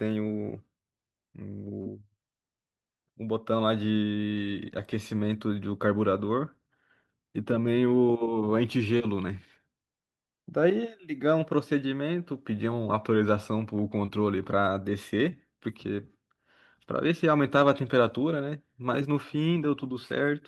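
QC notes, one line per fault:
1.81–1.88 s, 8.98–9.01 s, 14.05–14.10 s: short concealed packet loss. About 40, 20 and 20 ms of audio never arrived, and the decoder stretched the preceding sound over each gap, heard as a brief smear. A spectrogram shows frozen, repeated harmonics or blurred noise there.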